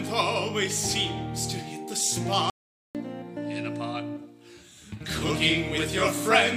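An audio dropout to silence runs from 2.5 s to 2.95 s. The sound cuts off abruptly mid-flow and returns just as suddenly, leaving about 0.45 s of silence with no room tone or noise floor underneath. Whatever occurred in that span is missing outright. The cause is likely a brief loss of the input signal, such as a disconnected device, a dropped link or a momentary mute, while recording continued and wrote silence into the gap.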